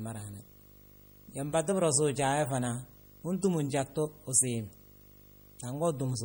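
A speech recording in which a video screen or display cable is coupling into the audio path for the whole clip, producing video or display buzz: a steady 50 Hz buzz locked to the picture's field rate, with hash riding above it and a very high tone at 15.6 kHz from the line scan. The buzz sits roughly 25 dB below the speech. Layered on top of this throughout is plainly audible coding damage, most likely from MP3 compression at a low bitrate, which fits something around 48 kbps. Starved of bits, the encoder drops weaker frequency components that then flicker in and out from frame to frame. The result is a watery, swirling texture and smeared consonant attacks across the speech.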